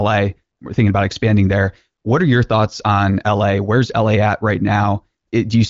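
No technical faults can be heard in the speech, which has the bandwidth of AMR wideband (HD Voice) coding, with nothing above 7.5 kHz, at a rate that fits 23.05 kbit/s, and any coding damage is faint at most.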